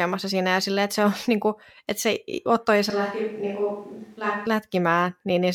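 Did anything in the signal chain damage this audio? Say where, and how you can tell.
Yes. From 2.90 s to 4.46 s the speech turns abruptly roomy and hollow, loses bass, drops about 5 dB, and gains a faint room noise floor. It then snaps back. This is likely a switch to a distant microphone at the capture stage, replacing the close microphone.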